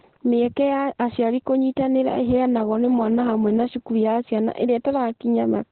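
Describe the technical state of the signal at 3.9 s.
Opus voice compression is present at 3.9 s, as throughout the speech. The sound points to the SILK linear-prediction coder in narrowband mode at roughly 8 kbps, cutting everything above 4.3 kHz and coding the excitation coarsely, so the voice comes out muffled, hoarse and slightly robotic.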